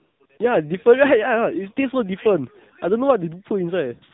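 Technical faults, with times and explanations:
Throughout: AMR narrowband mobile codec. The speech has passed through the AMR-NB phone codec at a low rate, which fits its 7.4 kbps mode, and the damage is plainly audible. With 8 kHz sampling nothing above 4 kHz survives, so the sound is dull and boxy. At this bitrate the vocal-tract model is fed by only a few pulses per 5 ms subframe, which gives the voice a buzzy, synthetic edge.
0.00–0.20 s, 0.26–0.30 s, 0.38 s: AMR comfort noise. In these three gaps at the start of the clip the encoder judged the talker silent and stopped sending speech frames, for 195 ms, 40 ms and 20 ms. The receiver filled each gap with generated noise built from a coarse level-and-spectrum description. The real background is therefore swapped for smooth, steady hiss that cuts in and out abruptly between the short bursts of real audio.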